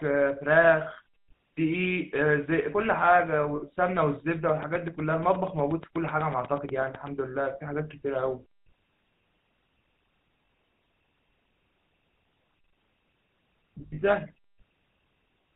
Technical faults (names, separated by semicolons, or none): GSM full-rate codec; lost GSM frames; train of clicks